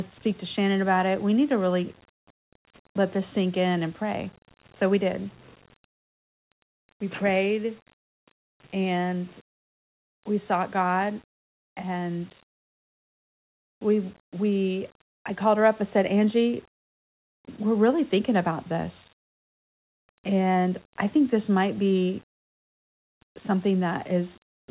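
No technical faults occur anywhere in the speech, so there are none to place in time order.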